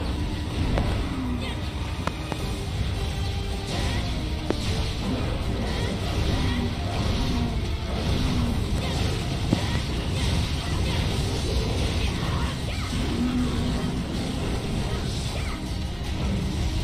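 Sharp pops jump out well above the sound, roughly 20 dB louder, while the audio carries on underneath. A quick pair lands between 0.78 and 0.94 s, another pair between 2.07 and 2.35 s, a single pop at 4.51 to 4.53 s, and a final pair between 9.53 and 9.78 s. These loud pops likely come from sudden voltage steps or pulses, from a plug, switch, static discharge or driver glitch, added to the signal and shaped by the circuitry downstream.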